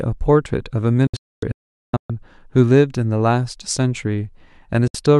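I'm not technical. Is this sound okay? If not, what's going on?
No. The speech cuts out in several quick gaps between 1.07 and 2.10 s, and briefly again at 4.88 s. This is a digital broadcast dropout: the receiver lost the signal and went silent until it recovered.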